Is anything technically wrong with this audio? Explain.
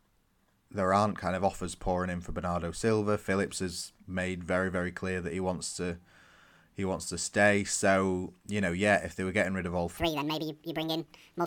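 Yes. From 9.97 s to the end, just after "getting rid of all", a section at the wrong speed plays 1.71 times too fast, likely from a clock mismatch, raising pitch about ten semitones.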